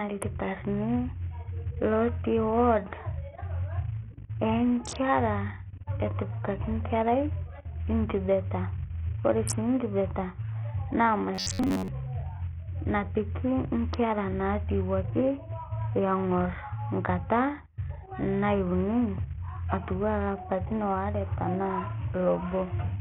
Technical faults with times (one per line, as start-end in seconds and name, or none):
0.00-23.01 Bluetooth SBC compression
11.35-11.88 robotic sound from repeated short buffers